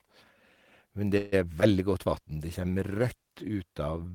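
At 1.17 s the speech stalls for about 0.17 s while the last sound carries on as a fading buzzy hiss. This is a call audio freeze, likely from packets arriving late and the jitter buffer running dry. When the speech resumes, nothing is lost, but everything after that point now runs about 148 ms late.

A moment later, from 1.60 to 1.63 s, there's short concealed packet loss. Roughly 32 ms never made it to the decoder in time. The receiver patched about 12 ms by extending the previous sound, and the other 20 ms is simply gone, so you hear a quick smear or wobble.

From 2.06 to 3.57 s you get a call bitrate drop. The encoder was pushed from 32 kbps down to 18 kbps and stayed at that floor for about 1.44 s. With so few bits it codes much more coarsely, and the speech turns rough and watery until the rate recovers.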